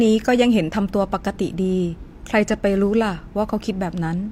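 Nothing technically wrong turns up in this short bit of speech; there's simply no fault to point to here.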